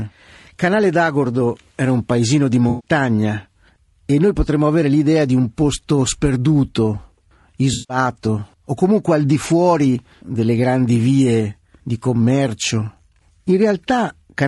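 A speech recording, likely run through low-delay AAC compression (AAC-ELD) at a low bitrate, around 32 kbps to judge by the sound, leaving the voice plainly rough and grainy throughout. AAC frame loss with concealment hits from 2.69 to 2.91 s and from 7.73 to 7.97 s: the decoder patches the missing stretches from earlier spectrum, so each gap comes out as a smeared, noisy patch.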